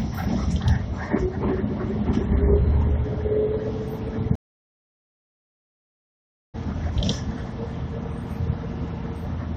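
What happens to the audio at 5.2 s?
At 5.2 s the audio is inside a stream reconnect gap. The connection dropped at 4.35 s and everything goes silent for about 2.18 s, until 6.56 s. During that time the player re-established the link and started a fresh decoder partway through the stream. When sound returns, it does not pick up where it stopped. It jumps ahead by roughly one and a half seconds, so that stretch of the material is simply missing.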